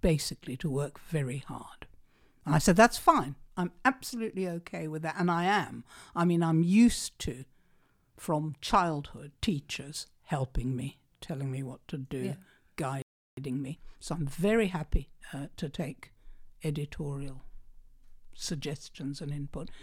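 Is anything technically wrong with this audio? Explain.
Yes. At 13.02 s the speech cuts to silence for about 0.35 s, a playback stall, likely caused by the player running dry of buffered data; the waveform shows a flat gap. From 13.37 s to 16.37 s comes time-compressed catch-up: tiny segments are cut and cross-faded to run 1.1 times fast, sounding hurried at normal pitch, visible as subtly irregular, tighter spectrogram patterns.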